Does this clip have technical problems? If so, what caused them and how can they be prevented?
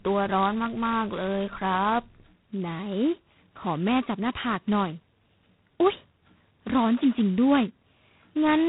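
Yes. Throughout, a harsh, rasping hiss tracks the speech level and nothing passes above 3.9 kHz, the sound of G.726 ADPCM coding prediction error coarsely, which fits its 16 kbit/s rate. Running the link at 32 kbit/s or on a wideband codec would prevent it.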